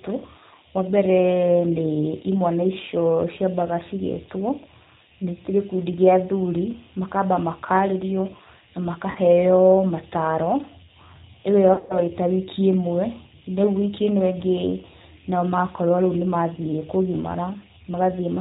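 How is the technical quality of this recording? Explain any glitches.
The recording has plainly audible low-bitrate coding throughout, plus two dropouts where the audio smears and fades.

Across the whole clip the speech sounds narrow, slightly rough and synthetic, with nothing above 4 kHz. That is the G.729 codec, here in its G.729A form at 8 kbit/s. It doesn't send the waveform. It sends a vocal tract filter, a pitch predictor and a few pulses per frame, and the decoder rebuilds speech from those. That keeps the words intelligible but strips the top end and leaves the texture coarse.

From 9.11 to 9.18 s, and again from 11.74 to 12.00 s, the sound turns into a buzzy or noisy smear that weakens, then takes a moment to recover. This is VoIP packet loss concealed by the speech codec. The first gap covers about 40 ms of missing audio, which fits two lost packets. The second is worse: about 140 ms is missing, scattered over 160 ms, with a longest unbroken run of 100 ms. 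In each gap the decoder keeps extending its last pitch and filter with falling gain. Because each frame builds on the previous one, the speech stays distorted briefly after packets arrive again.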